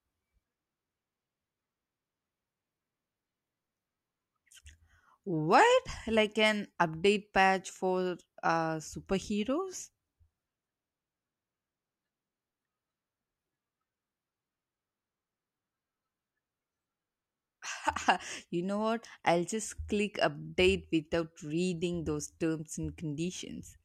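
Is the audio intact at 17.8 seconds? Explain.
Yes, at 17.8 seconds the speech plays through cleanly, with no dropout, click, distortion or other fault to be heard at that moment.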